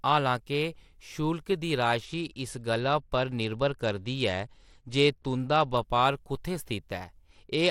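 From 2.05 to 5.77 s, just before "बपार कुत्थैं", the speech goes dull and gritty, and again from 7.3 s to the end. It's a Bluetooth SBC bit pool drop: the link starved the upper sub-bands, consistent with the bit pool falling from 31 to 12, near 88 kbps.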